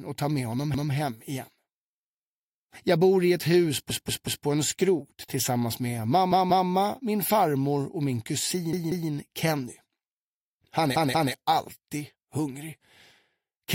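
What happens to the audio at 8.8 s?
There's a repeated buffer from about 8.73 to 9.10 s. New audio didn't arrive in time, so the same roughly 186 ms chunk got played twice more, which fits an 8192-sample buffer. You hear a stuttering triple repeat with a hard join each time, though no audio seems lost.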